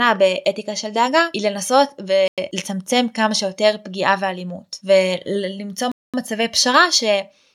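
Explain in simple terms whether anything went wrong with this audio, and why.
The speech cuts to silence twice, at 2.28 s for about 0.1 s and at 5.92 s for about 0.22 s: a Bluetooth stall, likely wireless interference delaying data. The gaps are clean silence, not crackle or garbling.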